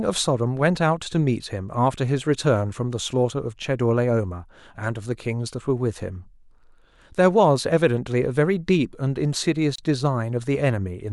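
At 9.76 s the speech drops out for about 27 ms, ending at 9.78 s. This is a gap at a join of encoded pieces. The audio seems to have been encoded in separate chunks of about 10 s and joined without trimming. Each chunk kept its encoder start-up silence and the padding on its final frame. The hole sounds like a brief blink of silence. Its edges are softened by the codec. The speech then picks up exactly where it broke off.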